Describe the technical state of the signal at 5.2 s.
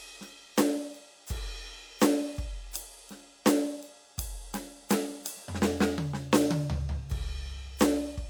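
At 5.2 s the music plays through intact, with no audible fault in the signal at that moment.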